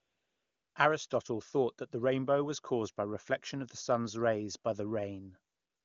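AMR comfort noise from 0.00 to 0.75 s and again from 5.53 s to the end: with no speech detected, the phone stopped sending speech frames and the receiver substituted smooth, steady synthetic noise, which switches in and out against the HD Voice speech, whose clean sound fits a high AMR-WB rate.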